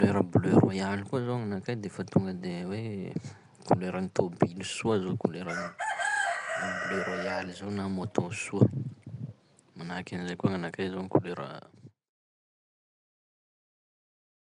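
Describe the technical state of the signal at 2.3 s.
At 2.3 s the speech carries plainly audible damage, likely from Nellymoser compression, present throughout. Coarse fixed-bit block coding leaves weak bands filled with noise, giving a hissy, smeared, underwater sound. A spectrogram shows nothing above 10.6 kHz and blotchy noise patches between harmonics.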